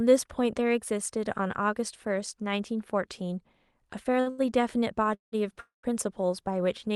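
At 4.21 to 4.29 s and again at 4.30 to 4.41 s, the speech hangs on one sound with a slight buzz or dip, held for about 60 ms and then about 80 ms. These are short stalls from a late packet: the jitter buffer ran dry, the receiver stretched the last sound, then resumed where it stopped.

From 5.14 to 5.35 s and from 5.60 to 5.86 s, the sound smears into a fading buzz or hiss and then drops to silence for roughly 140 to 150 ms before picking up again, adding about 180 ms and 230 ms of delay. These call audio freezes were likely caused by packets held up in transit, emptying the jitter buffer until delivery restarted.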